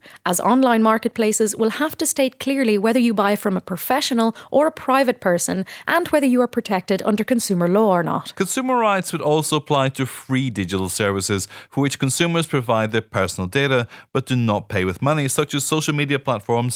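A speech recording. No technical fault can be heard anywhere in it.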